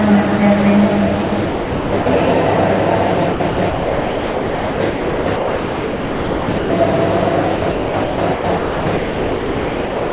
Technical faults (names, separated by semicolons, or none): sound chopped by the voice detector